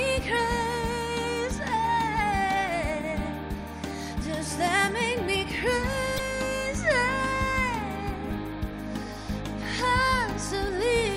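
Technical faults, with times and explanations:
6.16–6.20 s and 8.27–8.31 s, damaged data in a compressed stream: two short 40 ms blips where a stretch of the encoded stream went bad. The decoder can't read those frames, loses sync and hunts for the next valid frame header, so you get a brief glitch in the sound.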